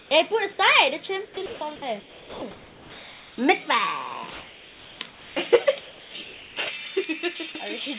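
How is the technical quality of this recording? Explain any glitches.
The recording has several glitches from voice-activity gating on a call link, plus uncorrected treble boost at the end. The audio stops at about 4 kHz throughout, which fits a narrowband call codec such as G.711.

Comfort noise in place of the background appears at 0.00–0.11 s, 4.31–5.36 s and 5.81–6.56 s. The likely cause is that the sender's voice detector judged these stretches as background and paused transmission, so the receiver generated synthetic noise in their place. It replaces about 110 ms, 960 ms and 660 ms of real ambience. The detail of the original background vanishes into a smooth, uniform hiss, and in the opening stretch it is about 6 dB quieter than the real background.

Sound chopped by the voice detector occurs from 1.25 to 3.38 s. The detector likely toggled between sending and muting more than once in this span, and the gaps were filled with comfort noise, about 1.6 s in all. 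Quieter parts and edges of the sound disappear intermittently. The result is a stuttering, gated texture.

Pre-emphasis left on runs from 6.67 s to the end at 8 s. A treble lift was applied for transmission, but the matching de-emphasis was never applied on playback. The curve is boosted by about 11 dB at 10 kHz relative to 1 kHz. Within the narrow band that survives, the top end sounds thin, bright and edgy, with hissy, exaggerated sibilance.

Sound dropped by the voice detector occurs at 7.52–7.55 s, inside that bright section. The detector likely mistook a quiet bit of sound for background and stopped sending. About 20 ms of real sound is lost and replaced by a 30 ms patch of steady noise. It is heard as a tiny dropout, a brief clipped gap before the sound resumes.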